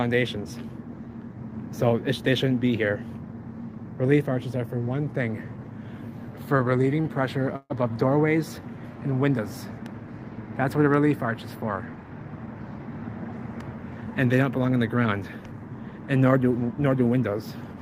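A packet arriving late at 7.01 s left the jitter buffer empty, causing a short stall from a late packet: the receiver stretched the last sound for about 25 ms until 7.06 s, then resumed at the same point, so the audio holds slightly too long with a slight buzz or dip, loses nothing, and runs 25 ms later afterwards. From 7.56 to 7.72 s comes a call audio freeze, most likely from packets held up in transit draining the buffer again: about 139 ms of continued sound fades as a buzz or hiss and ends in roughly 20 ms of silence, then the audio picks up where it stopped, so nothing is lost but the delay grows by another 139 ms. Between 12.03 and 12.78 s a jitter buffer speed-up trims excess buffered delay: the receiver cuts many short pitch-period pieces, about a tenth of a second in total, so the audio plays at 112% speed at unchanged pitch and sounds hurried.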